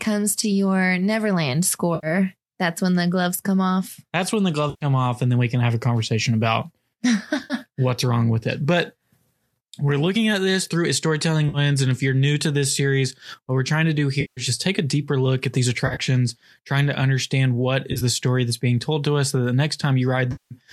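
Speech with eight brief smeared, phasey dropouts at 1.95–2.07 s (just before "that's when the gloves"), 4.70–4.85 s (between "when the" and "off and then we"), 7.44–7.54, 11.49–11.58 (after "this through a storytelling"), 14.21–14.41, 15.87–16.00, 17.93–18.02 and 20.32–20.54 s. These come from AAC frame loss with concealment, where the decoder patches 50–190 ms gaps from the last good spectrum, scattered in short runs at 15.87 and 17.93 s. The stream is likely low-delay AAC (AAC-ELD) at around 64 kbps, with only light grain.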